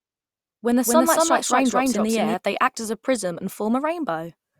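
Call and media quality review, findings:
Doubled audio track, 0 to 2.34 s, present from start, stops abruptly before "they act as a". Equal-level full-band copy trails by about 200 ms, likely from a slower second capture path. Not echo: no decay, no room colour.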